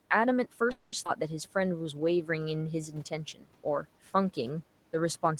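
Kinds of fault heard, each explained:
call audio freeze: Packets likely stalled in transit and the jitter buffer ran dry, so the receiver stretched the last sound into a fading buzz or hiss for about 210 ms from 0.71 s. When delivery resumed the speech carried on where it stopped, nothing lost, just a pause inserted.
skip ahead: A stretch of audio was discarded while later packets were already queued, so playback leapt forward at about 1.04 s. Roughly a tenth of a second of speech is gone, and the two sides are joined with only a tiny 10 ms bridge.
jitter buffer slow-down: With its reserve low, the jitter buffer rebuilt it by repeating single pitch periods and pause fragments between 1.59 and 2.64 s. That adds 123 ms, so the speech plays at 89% speed with unchanged pitch, drawn out.
speech cut by the noise suppressor: The suppressor mistook part of the speech for background and pulled it down with the room noise, which sits about 25 dB below the speech. 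Around 3.34 s, roughly 100 ms is attenuated by up to about 11 dB, sounding swallowed and faint.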